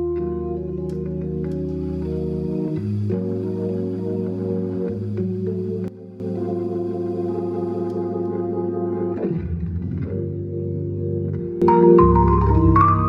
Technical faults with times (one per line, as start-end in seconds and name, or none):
5.88-6.20 sudden gain jump
11.62-13.08 sudden gain jump